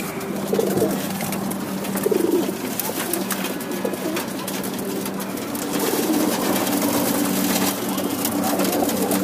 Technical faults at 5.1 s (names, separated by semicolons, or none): none